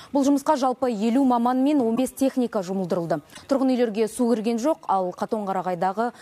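A short glitch breaks in at 1.95 to 1.99 s and again at 3.33 to 3.39 s, and each time the sound resumes further along. This is likely a broken MP3 bit reservoir. After a cut, the next frame reaches back for borrowed data and decodes another frame's bytes instead. Each disturbance spans roughly two frames of about 26.1 ms.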